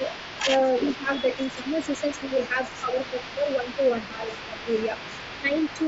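From the first moment to the end, an echo leak is audible. A faint copy of the speech returns about 364 ms later, roughly 15 dB down, likely because a loudspeaker's echo canceller let some of the sound through. Speech suppressed in double talk appears at 0.0 to 0.04 s, 0.98 to 1.23 s, 1.55 to 1.68 s, 2.29 to 4.56 s and 5.42 to 5.52 s. In these spots the level dips, by about 10 dB at most and about 5 dB in the last one. The longest stretch is turned down for about a second in total, in pieces. The likely cause is an echo canceller turning down the speech while the other side talked too.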